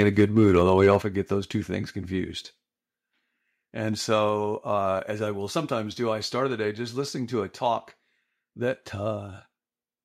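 Speech, and the opening stretch from 0.0 to 0.96 s has microphone overload: the loudest syllables have a harsh, crackly edge because their peaks are flattened at the converter's ceiling. The input was driven roughly 3 dB past full scale, enough that around one percent of the samples are clipped. The likely cause is the microphone's input gain simply being set too high for how loudly the talker was speaking. Right after that, at 1.02 s, you hear the microphone volume stepped down: voice and room tone both drop suddenly by about 6 dB. A second, gentler step of about 2 dB follows at 4.29 s. The first coming straight after the distorted peaks, these are most probably the call software's automatic gain control noticing the clipping and pulling the device's input level down in steps.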